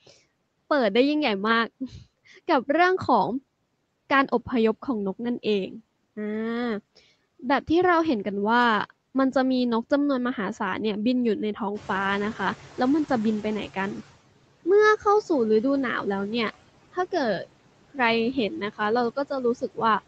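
Speech recorded through a call path shows noise suppressor artifacts all the way through. The suppressor pulls the background down by about 17 dB between phrases, so on a spectrogram the gaps look patchy and mottled rather than evenly grey, with residual noise fluttering in isolated time-frequency blobs. The spectrogram also shows nothing above 8 kHz, consistent with a wideband call codec. From 11.75 to 14.04 s the noise suppressor is catching up. The room noise jumps by around 15 dB near 12 s, and at first it comes through reduced by only about 11 dB. Over roughly 2.3 s, as the noise estimate adapts, the waveform's floor visibly shrinks back down. Speech is cut by the noise suppressor at 18.33–18.8 s and 19.55–19.78 s. Parts of the speech were mistaken for noise and dropped by about 15 dB and about 17 dB, for around a sixth and a tenth of a second. These appear as sudden notches in the waveform envelope and faint, swallowed speech.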